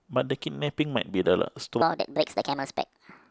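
At 1.82 s the speech jumps into a section at the wrong speed, which runs to the end of the clip. From that point the audio plays about 1.48 times too fast. Pitch rises with tempo, by roughly seven semitones. The voice suddenly sounds higher, thinner and hurried. The change is abrupt, not gradual. The likely cause is a playback or editing step that clocked this portion at the wrong rate.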